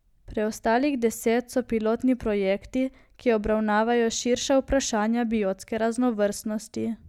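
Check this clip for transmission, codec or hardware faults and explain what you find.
Nothing stood out on listening to the speech in this clip.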